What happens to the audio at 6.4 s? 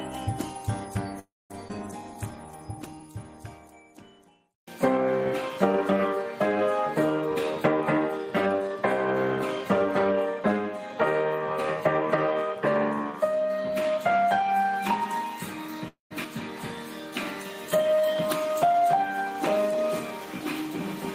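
Nothing goes wrong at 6.4 s; the audio runs through that moment intact, with no dropout, click, glitch or other fault.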